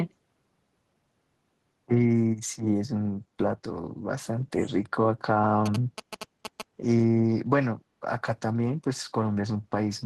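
At 3.26 s the echo canceller, reacting to loudspeaker playback, clamped the microphone gain, so the background was gated by the echo canceller: the room sound dips by about 6 dB for roughly a tenth of a second, until 3.37 s, then returns.

From 5.66 to 6.62 s a nearby 2G phone was signalling, and the audio circuitry rectified its radio transmissions as GSM signalling bursts. The result is a galloping run of ticks and short buzzes at about 217 Hz, sitting around 10 dB below the speech.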